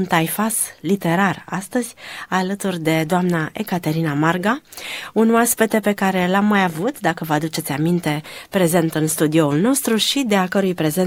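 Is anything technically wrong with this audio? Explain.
No, nothing technically wrong stands out here; it all sounds just as it should.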